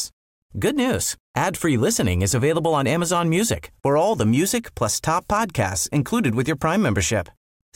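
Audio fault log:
No audible faults anywhere in this speech recording.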